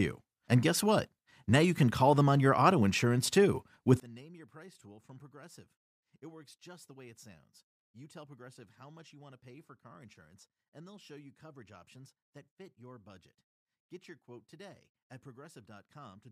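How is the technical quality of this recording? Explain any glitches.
Only the opening seconds are clean; after that, one serious fault takes over. One channel inverted, from 4.0 s to the end: a likely reversed-polarity channel cancels the centred speech in mono, leaving only a faint residue about 26 dB quieter.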